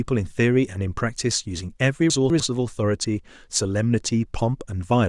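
A speech recording with a brief jumbled moment between 2.1 and 2.4 s caused by chunks out of order. One 100 ms chunk plays two chunks late, after the two that should follow it, so the sound in that span is garbled, with three hard joins. Unlike a dropout or stutter, nothing goes missing and nothing repeats. All the audio is present, only rearranged.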